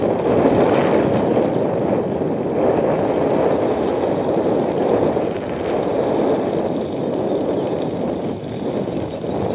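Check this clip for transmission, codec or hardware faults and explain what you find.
No transmission, codec or hardware faults are present; the band-limiting to nothing above 4 kHz fits a narrowband telephone codec such as G.711 mu-law and is expected for this call path, as is the bass roll-off from the microphone processing's high-pass filter.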